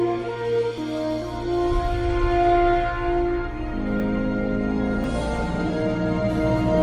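Three abrupt jumps in the sound occur at 0.78 s, 4.0 s and 5.04 s, with no gap of silence. The likely cause is a dropped buffer (overrun): unread samples were overwritten and the edges spliced, losing about 20 ms at the first two points and about 70 ms at the third.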